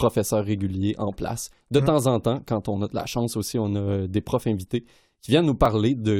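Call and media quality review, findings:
Tiny skip at 5.65 s, waveform jumps. Overlap between stream segments: overlapping timestamps at a 6-second segment boundary, player trimmed about 6 ms of undoubled audio.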